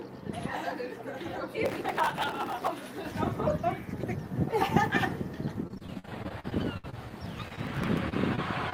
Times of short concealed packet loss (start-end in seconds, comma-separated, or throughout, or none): 7.48-7.59, 8.09-8.40, 8.70-8.74